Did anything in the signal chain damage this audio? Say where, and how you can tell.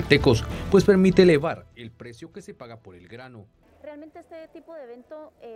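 Yes. Zipper noise appears from 1.32 to 1.8 s, during a gain stage at the driver or buffer level. The level falls by about 25 dB in audible 2 dB steps, around 30 per second. Each unsmoothed step clicks, so a ticking rides on the fade.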